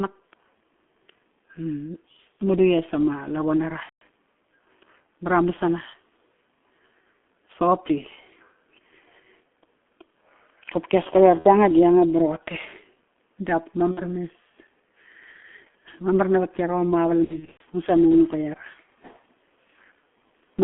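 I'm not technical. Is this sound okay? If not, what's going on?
No. The speech sounds muffled and hoarse for the whole clip, as if heard through an old phone line, and consonants smear together. This is the G.723.1 codec, an early internet-phone compressor. It keeps only a narrow band of sound, roughly 200 Hz to 3.4 kHz, and squeezes the voice into very little data. It updates its model of the voice slowly, so quick sounds get blurred.

There are also brief glitches where the voice turns into a buzzy, droning tone or a smeared hiss that fades out. They occur at about 3.83 to 4.02 seconds, 11.39 to 11.48, 13.91 to 14.00, and 17.24 to 17.63, where several short dropouts are scattered close together. This is VoIP packet loss concealed by the speech codec. Pieces of the call never arrived, so the decoder kept stretching the last bit of voice it had and let it die away. Each new piece builds on the previous one, so the voice can stay weak or warped for a moment after the gap ends.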